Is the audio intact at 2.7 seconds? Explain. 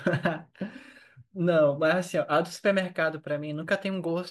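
Yes, the speech at 2.7 seconds plays through intact, with no dropout, click or other fault at that moment.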